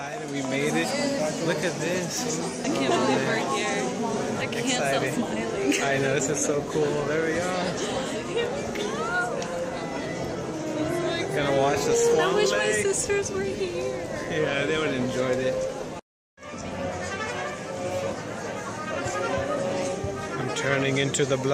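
From 11.92 to 12.03 s there is DAB burbling: bit errors at a rate of around 0.15 percent slipped past error correction into the MP2 data, corrupting individual sub-bands. Unlike a dropout or broadband click, the sound keeps going while watery, bubbling blips sit in narrow frequency bands.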